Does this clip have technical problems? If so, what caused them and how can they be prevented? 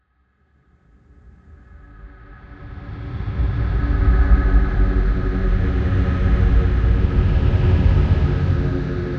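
No, nothing here needs fixing or preventing; the audio simply rises in a smooth fade-in from the very beginning to full level at about 4.24 s, an ordinary edit with no click or hard edge.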